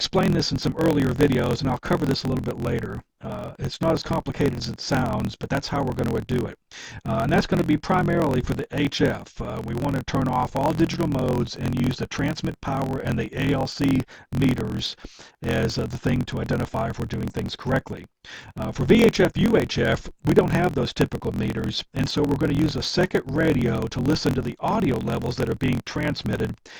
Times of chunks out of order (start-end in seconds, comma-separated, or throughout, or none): none